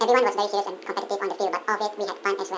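Throughout, the speech runs at double speed and a full octave high, a wrong sample rate fault: audio recorded at 8 kHz is played at 16 kHz without conversion. Speed and pitch rise together by the same 2.0 ratio, unlike pitch-shifting or time-stretching, which change only one.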